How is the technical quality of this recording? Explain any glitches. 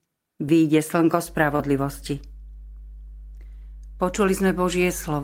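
The recording has two technical faults, both starting just after "výjde slnko".

From 1.24 s to the end there is mains hum. A ground loop or nearby transformer is leaking the 50 Hz power line into the signal. It is a steady low drone, roughly 15 dB below the speech. It persists under everything that follows.

From 1.56 to 1.60 s there is a short concealed packet loss. About 20 ms of audio never arrived in time. The decoder filled 27 ms by extending the preceding sound, then blended back. The result is a brief smear or wobble.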